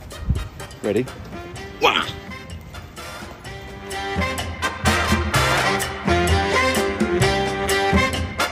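Nothing in the audio stood out as a technical problem on listening.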